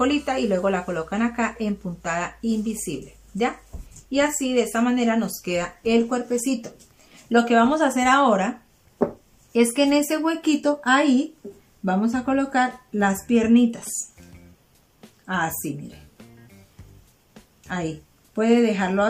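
No technical faults can be heard anywhere in the signal.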